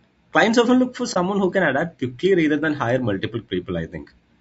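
Throughout the speech the voice sounds rough and grainy, with noise filling the gaps between harmonics and a thin, synthetic-sounding top band. This is likely low-delay AAC compression, AAC-ELD, whose short frames resolve pitch poorly; the damage fits a bitrate around 32 kbps.

From 1.13 to 1.17 s, between "often look for" and "who can adapt quickly", there is AAC frame loss with muting. The decoder zeroed the missing audio, about 30 ms, consistent with a single lost frame, leaving a brief, soft-edged dip that fades out and back in.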